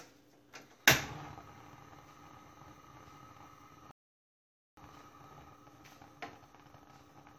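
At 3.91 s the sound drops abruptly into silence and holds there until 4.77 s, then picks up exactly where it left off, with nothing skipped. This is a rebuffering stall: playback ran out of downloaded audio and waited for more, adding about 0.86 s.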